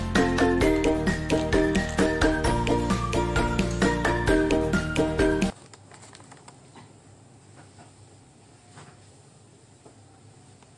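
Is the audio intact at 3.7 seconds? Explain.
Yes, the audio is intact at 3.7 seconds, with no dropout, click, distortion or other break in the signal at that point.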